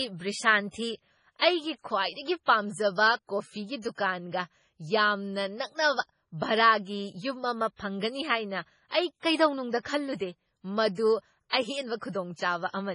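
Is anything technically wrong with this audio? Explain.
Yes. Throughout the speech the sound is watery and swirly, with nothing above 10.5 kHz and sibilants turning metallic and chirpy. This is likely heavy MP3 compression at a very low bitrate: starved of bits, the encoder cuts the treble and drops weak frequency lines that flicker between frames.

From 1.37 to 1.42 s there is pre-echo, a hiss about 45 ms long that arrives just before a sharp attack and softens it. The codec spreads the attack's quantisation noise across its whole block, so that noise also fills the quiet moment beforehand.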